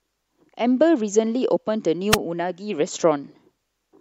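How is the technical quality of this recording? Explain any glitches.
One glitch: a wireless microphone squelch dropout at 2.10 to 2.18 s. The radio link fades, hiss rises briefly, the receiver mutes for about 5 ms, then the speech returns.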